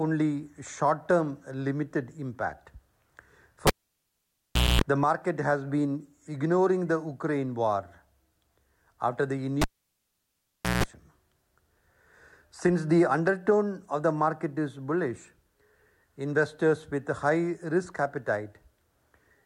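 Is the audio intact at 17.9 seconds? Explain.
Yes, the audio is intact at 17.9 seconds, with no dropout, click, distortion or other fault audible at that moment.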